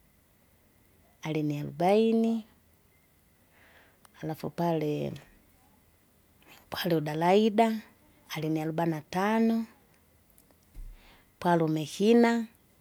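No technical faults can be heard anywhere in the speech.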